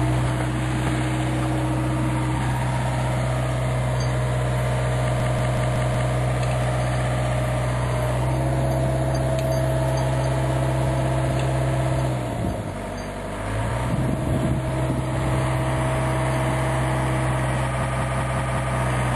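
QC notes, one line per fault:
5.20–6.13 s and 17.83–18.76 s, system hang loop: a stuttering repeat of one 186 ms slice, five times at 5.4 Hz, as a frozen system let the hardware recycle a buffer that fits 8192 samples.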